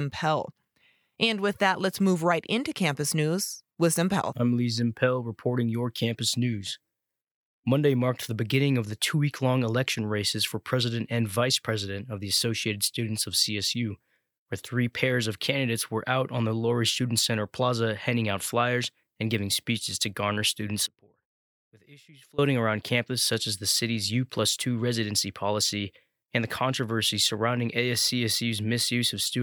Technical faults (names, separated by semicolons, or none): audio dropout to a faint residue